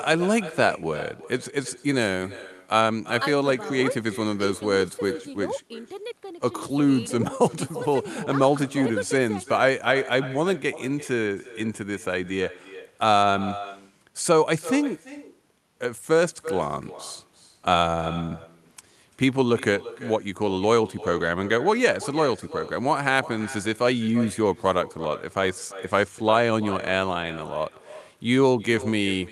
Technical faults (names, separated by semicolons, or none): echo with no canceller